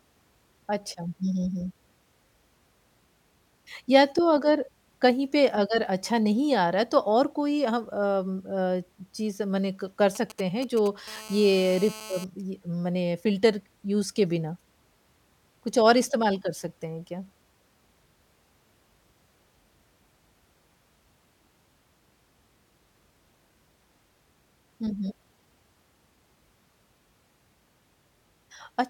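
GSM signalling bursts, 10.15 to 10.88 s: a nearby 2G phone's intermittent radio pulses, rectified by the audio circuit, give a galloping pattern of ticks and short 217 Hz buzzes, roughly 15 dB below the speech.

GSM phone buzz, 11.08 to 12.24 s: the phone now transmits steadily as in a call, and its rectified 217 Hz bursts produce a steady, raspy, harmonic-rich buzz about 17 dB below the speech.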